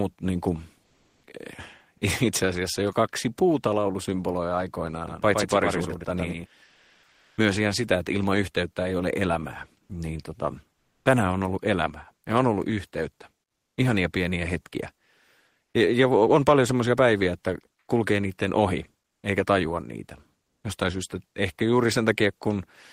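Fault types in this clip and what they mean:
Comfort noise in place of the background: In five pauses the real room background drops out and a flat, featureless hiss fills the gap, likely because the sender went quiet between phrases under discontinuous transmission and the receiver synthesised noise to cover it. The swaps run from about 80 ms to 740 ms, the longest near 6.6 to 7.4 s. The stand-in isn't always quieter. It's a few dB down in some gaps and about 4 to 5 dB up in others.
Onset clipped by the voice detector: Right at the end of the first comfort-noise stretch, around 1.25 s, the sound comes back in abruptly with its soft lead-in missing. About 20 ms of the start was lost, likely because the voice detector was a beat slow to notice the sound had resumed, so filler noise played where the real beginning should have been. It's short, but you hear a hard, slightly chopped entry rather than a natural rise.
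Doubled audio track: From about 5.08 to 6.46 s a second full-band copy of the audio sits roughly a tenth of a second behind the original and only a few dB quieter. It's likely the same signal picked up a second time through a slower path. It doesn't sound like a room echo, because the copy has no decay or reverberant colour. It switches on and off sharply at both ends, giving a clean, slappy doubling.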